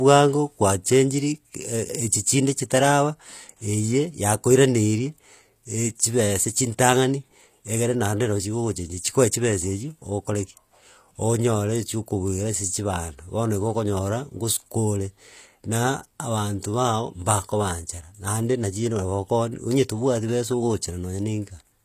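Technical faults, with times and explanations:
Throughout, HE-AAC compression, likely at a low bitrate around 24 kbps: only the lower spectrum is coded and the treble is rebuilt by copying lower bands upward, so harmonics misalign across the crossover, s sounds turn gritty and lispy, and nothing remains above 14.9 kHz.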